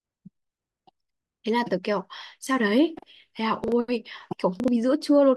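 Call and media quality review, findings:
Chunks out of order at 3.64–3.72 s and 4.60–4.68 s: brief garbled, jumbled moment in the speech. Two 40 ms chunks swapped each time, one chunk arriving late and played after its successor. Nothing missing, but three hard joins per event. Probable component: jitter buffer or playout queue releasing packets in arrival order rather than sequence order.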